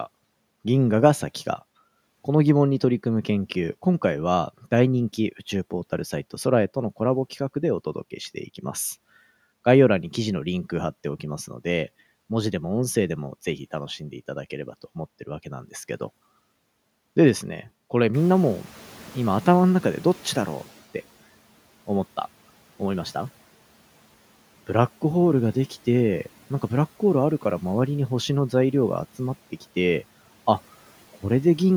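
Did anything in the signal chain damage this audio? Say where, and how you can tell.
Yes, in the call processing stage: the noise suppressor is catching up. The room noise jumps by about 14 dB at around the 18 s mark, and from 18.13 to 20.77 s the noise comes through with too little reduction before sinking by about 9 dB as the suppressor's noise estimate adapts. That 2.64 s lag is the giveaway. Once it settles, the room noise sits about 26 dB below the speech.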